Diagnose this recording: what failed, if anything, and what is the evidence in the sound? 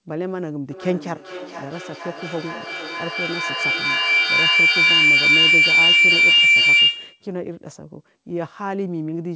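An acoustic loop formed during call processing: a microphone picked up a loudspeaker carrying the same call, and each pass around that loop came back louder than it left. The result is a feedback howl from 0.71 to 7.33 s, narrowing to a tone around 2 kHz. It pulses roughly every half second, the loop's round-trip delay, and peaks about 12 dB above the speech. Band-limited at 8 kHz, the call path sounds consistent with G.722 at 64 kbps.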